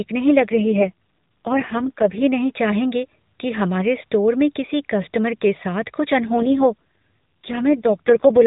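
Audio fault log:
0.40 to 2.22 s and 6.18 s to the end, AMR rate drop: the speech turns rougher and buzzier without any gap or change in band, easing back just before "नहीं चाहेंगे कि हमारे". The mobile codec's reduced bit budget, which fits a step from 12.2 down to 4.75 kbps, leaves too few pulses to model the voice cleanly.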